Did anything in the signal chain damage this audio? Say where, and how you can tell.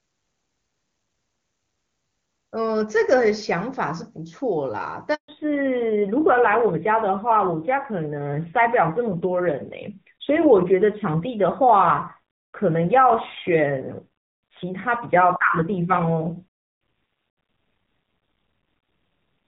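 Yes. At the network stage there is a handover gap from 5.14 to 5.28 s. The speech decays within a few tens of milliseconds into 140 ms of dead silence, because no frames arrived while the call switched links, so that stretch is simply missing.

From 5.28 s to the end, the codec stage shows a fallback to narrowband. Before the gap the band reaches about 7 kHz, as clean HD Voice at a high rate would. After it, nothing above 4 kHz survives and the speech sounds duller and grittier, which fits a low-rate AMR-NB mode around 7.4 kbit/s.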